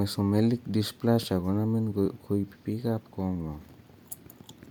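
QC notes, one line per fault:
Throughout, Bluetooth LC3 compression: the speech has a plainly audible grainy, breathy edge, likely from LC3 transform coding, consistent with about 48 kbps and 10 ms frames.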